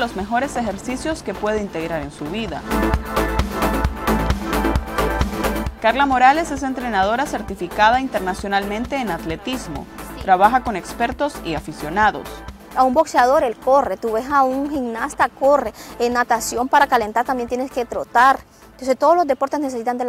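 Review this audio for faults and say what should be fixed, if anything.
GSM signalling bursts occur from 14.51 to 15.94 s. A galloping dit-dit-dit of short buzzes at about 217 Hz sits roughly 20 dB below the programme. A 2G phone near the recording chain was exchanging brief control bursts with its network. The audio circuitry rectified that radio energy, turning its pulse rhythm into an audible buzz. Keep mobile phones switched off or well away from microphones, cables and preamps while recording.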